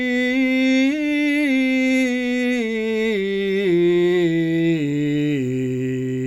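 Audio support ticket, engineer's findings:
Engineer's findings: no fault found in this music audio.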